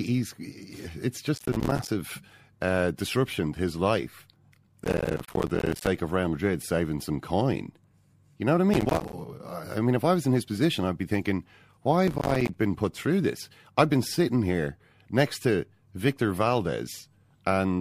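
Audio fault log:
1.35–1.89 s, 4.84–5.87 s, 8.74–9.13 s, 12.08–12.55 s: processor overload crackle. Dozens of buffers of about 5 ms each miss their deadline and drop to silence, tearing the speech into gritty crackle. Unlike a single dropout, the hard-edged gaps come densely in bursts and stop abruptly.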